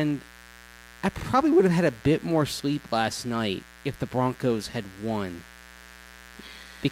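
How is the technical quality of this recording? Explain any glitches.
The technical quality is held back by one fault: a mains buzz runs through the whole recording.

The buzz sits roughly 25 dB below the speech and is locked to 60 Hz mains. Sharp switching spikes leak in twice per cycle, so harmonics stack up into the kilohertz range. It sounds like a steady, raspy buzz under the speech.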